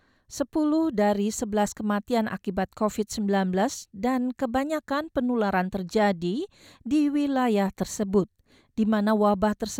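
No technical faults are audible.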